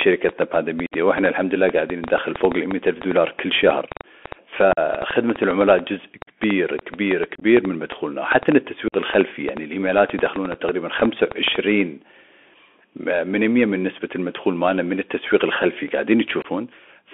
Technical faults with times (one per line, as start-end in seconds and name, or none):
0.00-17.14 Bluetooth CVSD headset codec
0.01-11.56 train of clicks
0.86-0.93 unconcealed Bluetooth headset packet loss
4.73-4.79 unconcealed Bluetooth headset packet loss
7.35-7.44 unconcealed Bluetooth headset packet loss
8.88-8.94 unconcealed Bluetooth headset packet loss
10.54 unconcealed Bluetooth headset packet loss
16.42-16.46 unconcealed Bluetooth headset packet loss